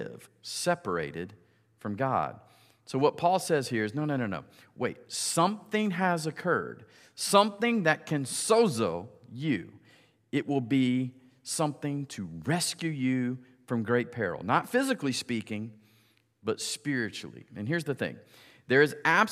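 No technical faults can be heard anywhere in the recording. Nothing in the speech calls for comment from a technical point of view.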